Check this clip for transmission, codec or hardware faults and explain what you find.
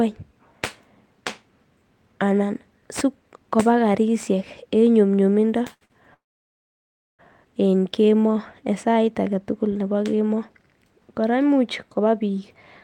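Four transmission faults are audible, all tied to late-arriving packets and how the receiver's jitter buffer copes with them.

Two short stalls from a late packet occur at 5.73 to 5.83 s and 5.85 to 5.92 s. Each time the jitter buffer ran dry, so the receiver stretched the last speech sound, by 78 ms and then 47 ms, until the packet arrived. Each sound is held too long, with a faint buzz or dip.

A call audio freeze follows from 6.14 to 7.21 s. The sound is continued briefly, then drops to about 1 s of silence before speech resumes where it stopped, adding roughly 1.05 s of delay. The likely cause is packets held up in transit, emptying the buffer.

A jitter buffer speed-up runs from 11.88 to 12.55 s. With too much audio buffered after delayed packets arrived together, the receiver trimmed short pitch-period pieces, about 70 ms in total. Speech plays at 110% speed with unchanged pitch and sounds hurried.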